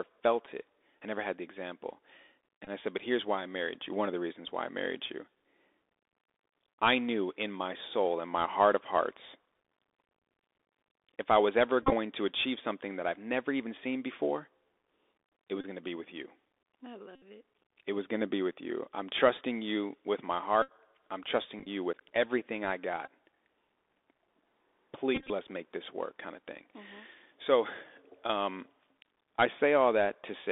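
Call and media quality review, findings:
Narrowband, dull speech throughout, band limited to roughly 300 Hz to 3.6 kHz; scratchy s sounds, granular hiss under speech, distortion on loud high content. Bluetooth CVSD headset codec: 64 kHz one-bit delta modulation, adaptive step too slow for steep loud slopes.

Short buzzy bursts near 267 Hz at 2.65, 11.83, 15.61 (just before "going to be with"), 17.15 (after "be with you I"), 20.62 (after "trusting you with my"), 21.59, 23.06 and 25.15 s; 22.5 to 108.8 ms affected, some scattered, longest unbroken stretches in the scattered ones about 15 to 20 ms. Bluetooth headset packet repeated: lost link packets replaced by replaying the previous packet's bits, 3.75 ms repetition period heard as buzz.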